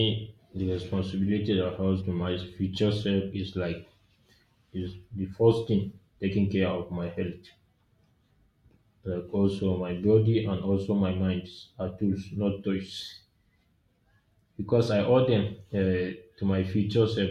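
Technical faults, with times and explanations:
13.61 s, damaged data in a compressed stream: a very brief blip cuts into the speech. Part of the compressed stream was corrupted, so the decoder misread that frame, lost sync, and emitted garbled output while hunting for the next valid frame header.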